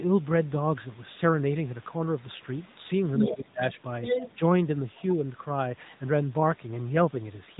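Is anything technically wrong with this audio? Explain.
Yes. There are three problems.

AMR narrowband mobile codec, throughout. Nothing passes above 3.8 kHz. The speech is squeezed through a low-bitrate vocal-tract model, consistent with a mid-rate mode near 10.2 kbps. The damage is plainly audible. The voice sounds buzzy, synthetic and muffled.

Other side's voice leaking through, from 3.17 to 3.34 s and from 4.03 to 4.38 s. A second voice appears in these stretches. It is roughly as loud as the main talker. The likely cause is an echo canceller that left loudspeaker sound in the microphone signal.

Speech suppressed in double talk, from 3.29 to 3.62 s. This overlaps the first leak. The talker's voice dips sharply, by about 20 dB at its deepest, for roughly a third of a second. Both voices were present at once. The canceller likely could not separate them, so it turned everything down.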